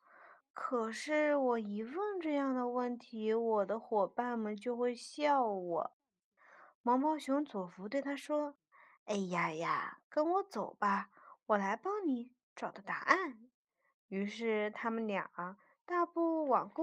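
Speech, with no audible faults.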